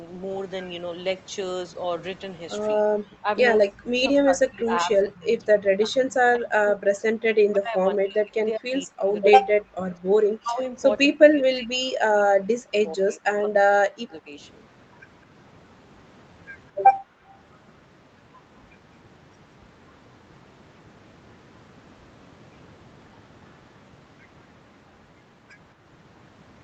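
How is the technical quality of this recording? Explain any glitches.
The recording has two clear faults, both tied to echo cancellation, and the top end stops at 8 kHz throughout, as expected on a call line.

Speech suppressed in double talk occurs at 2.76–3.28, 3.62–9.79, 9.96–10.08, 10.4–10.75, 11.05–14.37 and 16.71–16.81 s. The speech dips, thins and breaks up, falling by up to roughly 40 dB. The likely cause is the far side talking at the same moment, so the canceller ducked everything it heard.

Background gated by the echo canceller occurs at 17.09–17.35 s. The room sound drops by about 31 dB for roughly a third of a second, then returns. The canceller clamped the microphone while the loudspeaker played and then let go.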